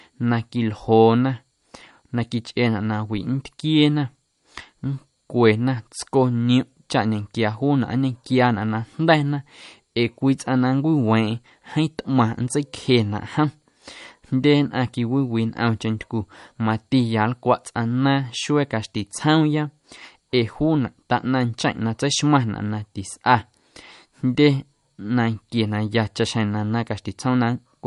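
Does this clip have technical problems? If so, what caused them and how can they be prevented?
Yes. Throughout, the speech sounds watery, with nothing above 11.2 kHz. This is likely MP3 compression at around 48 kbps; unlike a plain low-pass filter, weak detail swirls. Encode at a higher bitrate or keep a lossless original.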